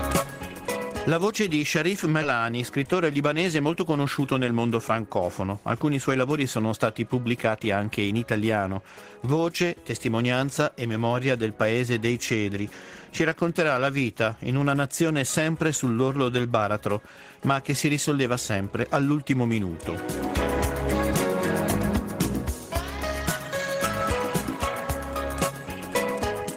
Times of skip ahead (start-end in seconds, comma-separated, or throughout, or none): 2.22